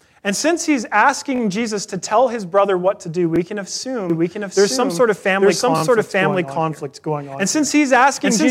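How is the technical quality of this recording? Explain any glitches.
Three brief stutters and one long doubling of the speech are the faults here.

Repeated buffer at 1.36 s, 3.36 s and 5.78 s: new audio failed to arrive in time, so the playback device replayed its last 20 ms block. The two stutters at 1.36 s, right after "since he's", and at 5.78 s each repeat the block twice, about 40 ms of the same slice. The one at 3.36 s, after "brother what to do", repeats it once. Each is heard as a hard-edged buzz or click.

Doubled audio track from 4.1 s to the end: a second full-band copy of the speech enters abruptly and runs behind the original by about one second, at roughly the same loudness. It has no decay or room colour, so it sounds like a second, lagging version of the speech laid over the first rather than an echo. The likely cause is the same signal being captured again through a slower path and mixed back in.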